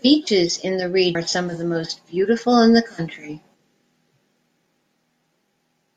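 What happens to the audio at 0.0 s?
At 0.0 s the speech starts cleanly, with no fault at that moment.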